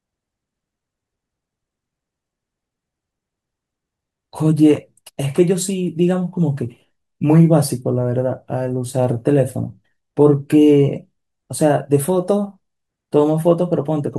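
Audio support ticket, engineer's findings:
No technical faults found.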